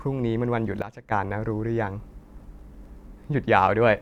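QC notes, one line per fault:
0.82–1.12 s, sudden gain jump: the speech level drops by about 13 dB from one sample to the next and stays down until 1.12 s, where it steps back up just as abruptly. The background noise falls and rises in lockstep with the speech, so the whole signal, not the talker, changes level. This is likely a digital gain change applied instantly, with no ramp, in both directions.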